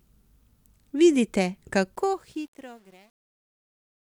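A speech clip fading out over its last two seconds, ending at 4.01 s. The fade shows truncation distortion on a fade from 1.95 s to the end. The digital level stage keeps too few bits and adds no dither. As the level drops, the waveform collapses into coarse square steps. The grit fits roughly 9-bit resolution. From 2.42 s to 4.01 s it is worst. The tail turns gritty.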